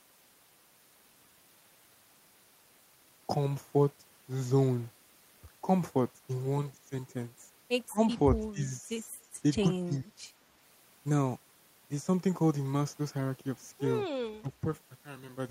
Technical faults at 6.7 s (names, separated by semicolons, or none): none